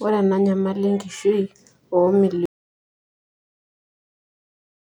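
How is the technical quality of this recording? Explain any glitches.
The recording has one fault. At 2.46 s an audio dropout to silence sets in: the input likely disconnected while recording continued, so the speech stops abruptly and silence, with no room tone, runs to the end.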